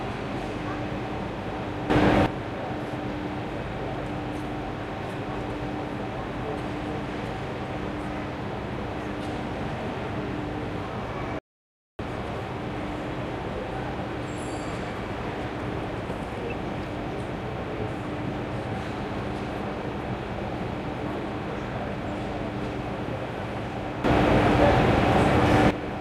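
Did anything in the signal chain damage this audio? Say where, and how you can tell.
Yes. From 1.90 to 2.26 s and again from 24.04 to 25.71 s, the sound and its background noise leap up together by about 12 dB with an abrupt edge, then drop back. This is a sudden gain jump, likely a digital gain change applied without a ramp during processing.

At 11.39 s the audio cuts out mid-flow and returns at 11.99 s, leaving 0.6 s of silence with no room tone. This audio dropout to silence likely came from the input being lost at the driver or device link while the recorder kept writing zeros.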